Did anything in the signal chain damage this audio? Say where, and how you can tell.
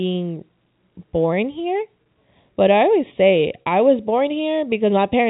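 Yes. One channel arrives a fraction of a millisecond late, a delay of just a few samples, and the two are then summed to mono. The shared content cancels at evenly spaced frequencies starting around 1.5 kHz. That leaves a hollow, phasey colour with fixed notches that lasts through the whole clip.

At the network stage, 40 ms of audio went missing from 3.62 to 3.66 s, right after "I always say". That fits two lost packets. The receiver bridged the gap by repeating the last pitch period, so the sound briefly holds on a slightly buzzy tone, inside a G.711 telephone band that itself passes cleanly.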